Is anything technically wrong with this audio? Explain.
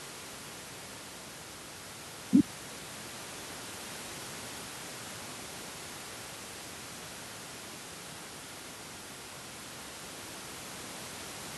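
No, nothing technically wrong.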